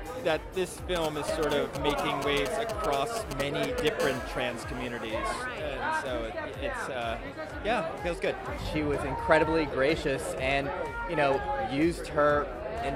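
A galloping dit-dit-dit of brief raspy buzzes runs from 0.96 to 3.89 s, sitting nearly as loud as the sound itself. These are GSM signalling bursts: a 2G phone close by is exchanging short groups of radio bursts with its network, and something in the audio circuit rectifies that energy into audible clicks. Each buzz fragment repeats at about 217 Hz, the phone's transmission frame rate.

From 4.00 to 5.15 s the pattern gives way to a continuous, hard, raspy buzz at 217 Hz, rich in harmonics and about 15 dB below the sound. This is GSM phone buzz: the phone is now transmitting steadily as in a call, pulsing 217 times a second, and the rectified pulses form a constant drone that has no relation to the audio.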